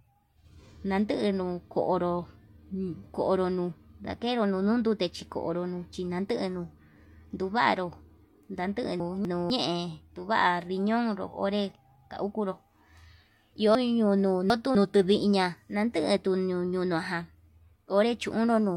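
At 9.0 to 9.5 s and again at 13.75 to 14.75 s, chunks out of order: a 250 ms block plays late, one slot behind in the first case and three in the second. Nothing is missing, but the sequence jumbles at hard joins.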